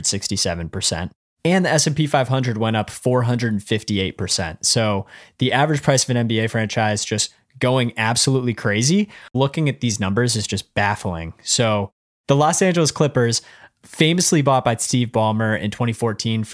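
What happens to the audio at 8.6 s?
Nothing goes wrong at 8.6 s; the audio carries straight through that point with no dropout, click, glitch or other fault.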